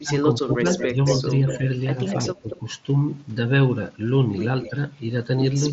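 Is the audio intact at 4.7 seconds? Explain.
No. From 4.63 to 4.70 s there is an echo leak: a faint copy of the speech about 15 dB below it, delayed by 231 ms, likely left behind by a far-end echo canceller that did not fully remove its loudspeaker pickup. On a spectrogram it shows as weak, smeared harmonics repeating the earlier pattern.

Overlapping it, from 4.69 to 4.78 s, is speech suppressed in double talk: the level dips by about 5 dB for roughly 100 ms, likely because the canceller turned down both talkers when they overlapped. The waveform envelope shows a brief sag, and the spectrogram fades slightly across the band.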